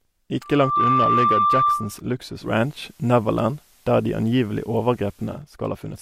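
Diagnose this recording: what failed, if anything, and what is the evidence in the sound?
Loudspeaker feedback squeal, in the analogue acoustic path, from 0.42 to 2.0 s: a 1.2 kHz tone swells in under half a second to a few dB above the speech, because the microphone hears its own loudspeaker with loop gain above one. A spectrogram shows one bright horizontal line, and the waveform envelope ramps up.

Digital radio blending to analogue, at the receiver's decoding stage, from 2.35 to 5.45 s: a 226 ms cross-fade to the FM broadcast brings up faint hiss about 40 dB down and shifts the level by about 3 dB. A spectrogram shows a raised noise floor.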